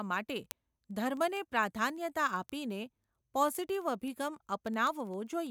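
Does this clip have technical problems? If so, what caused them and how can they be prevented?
Yes. From 0.11 s to 5.47 s the speech carries a steady stream of sharp ticks, roughly one every 70 ms, about seventy in all. These are word clock ticks. The receiving device is running on its own clock, out of step with the sender's by something like 300 ppm. Each time the two clocks drift a full sample apart, a single sample is dropped or repeated, leaving a tiny discontinuity in the waveform. To prevent this, lock the receiving device to the incoming digital signal or to a shared word clock.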